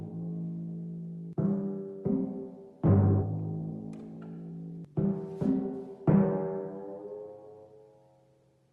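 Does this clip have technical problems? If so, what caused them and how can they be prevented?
Yes. At 3.21 s there is a skip ahead: about half a second of audio is missing and the two sides are butted together with no silence or fill, so the sound simply lurches forward. This follows late audio piling up behind a gap, and the receiver discarding the backlog instead of playing it. Unlike a dropout, no hole or concealment noise is heard. Preventing it means sizing the jitter buffer for the network's real burstiness so backlogs are drained gradually rather than cut.

From 3.61 to 6.15 s a jitter buffer speed-up runs the audio at about 106% of normal speed while the pitch stays unchanged. The receiver trims short pitch-period-sized slices again and again, shedding roughly 150 ms of accumulated delay. That constant pitch is what separates it from a sample-rate mismatch, where everything would also sound higher. 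The result is a hurried, slightly pressed quality across those two and a half seconds. Smoother network delivery, or a gentler catch-up rate, keeps this from being noticeable.

Behind both sits the Opus call path, whose band limit near 12 kHz and light coding texture fit a bitrate around 32 kbps.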